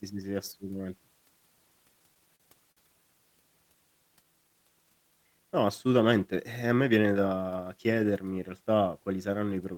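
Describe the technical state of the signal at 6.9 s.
At 6.9 s the signal is inside a jitter buffer speed-up running from 6.63 s to 6.97 s. The receiver's buffer had built up more audio than its target, so it trimmed short pitch-period-sized segments in quick succession, about 40 ms in total, to drain the excess. The speech plays at roughly 110% speed over that stretch while its pitch stays unchanged, giving a brief hurried quality to the delivery.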